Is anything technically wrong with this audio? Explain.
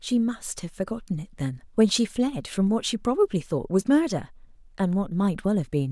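No, nothing in this speech recording points to a technical fault.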